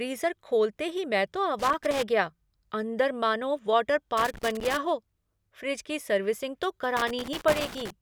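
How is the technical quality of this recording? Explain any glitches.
The speech gets interrupted three times by loose connector crackle: 1.59 to 2.03 s, just before "गया अंदर मानो वाटर"; 4.17 to 4.77 s, between that phrase and "हो फ़्रिज की सर्विसिंग"; and 6.97 to 7.90 s, right after "फ़्रिज की सर्विसिंग तो". Each time, a worn or dirty contact is flickering between connected and open, chopping the signal into ragged bits. You hear it as an uneven, scratchy burst, with pops from any DC on the line.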